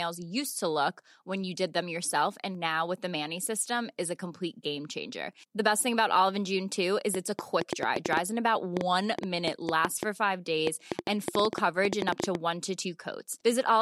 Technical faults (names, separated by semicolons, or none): train of clicks